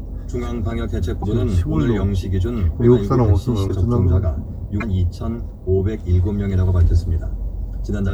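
At 1.22 to 1.24 s, 3.67 to 3.70 s and 4.80 to 4.83 s, the audio skips forward, each disturbance lasting about one MP3 frame, around 26 ms. The likely cause is a broken MP3 bit reservoir: after frames went missing, the next frame borrowed data from bytes that now belonged to a different frame.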